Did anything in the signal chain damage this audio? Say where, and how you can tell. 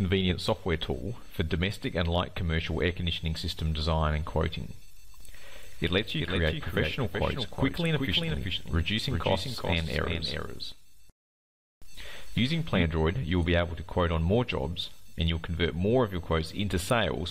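Yes, a doubled audio track from 5.2 to 12.8 s: a dry copy about 5 dB quieter lags about 0.4 s behind, likely a slower second capture path mixed in.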